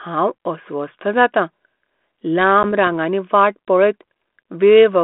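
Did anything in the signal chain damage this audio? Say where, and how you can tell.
Yes, at the network stage: packet loss on an ADPCM call at 2.63 s leaves about a 10 ms silent gap, then slightly distorted speech as the G.726 decoder's predictor and step size briefly lose sync.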